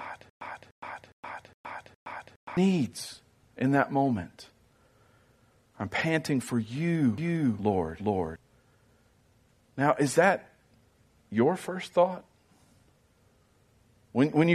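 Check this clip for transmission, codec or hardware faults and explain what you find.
Two faults are present in the speech.

From 0.00 to 2.57 s, already under way when the clip opens, a stutter with silent gaps repeats a 0.30 s burst five times, each followed by 0.12 s of digital silence, every 0.41 s. A stalled player or stream, likely retrying its last fragment, would do this. Unlike a scratch-style skip, the gaps are truly silent and the pacing stays even, and the speech meant for that span is missing.

From 7.18 to 8.36 s, right after "I'm panting for you", a doubled audio track appears. A full-band copy at roughly the same level trails by about 0.4 s, likely from a second, slower capture path or two misaligned copies. Unlike room echo, it has no decay or colouring and cuts in and out abruptly.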